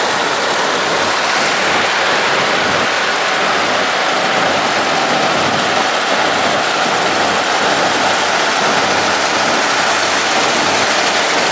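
No faults are audible; the sound carries the usual signature of call microphone processing, with the lowest bass rolled off by its high-pass filter and nothing above 8 kHz.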